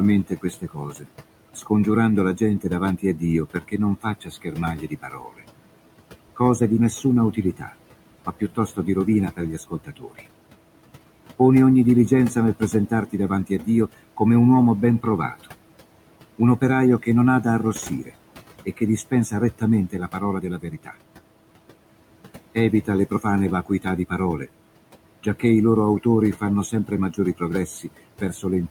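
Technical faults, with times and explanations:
Throughout: noise suppressor artifacts. Room noise, about 16 dB under the speech, sinks by about 18 dB between phrases and swells back beneath them.
0.28–5.42 s, 6.36–10.22 s, 11.39–15.46 s, 16.38–20.96 s, 22.55–28.7 s: speech cut by the noise suppressor. Soft speech sounds are mistaken for noise and dropped by about 13 to 18 dB, so they come across swallowed and faint.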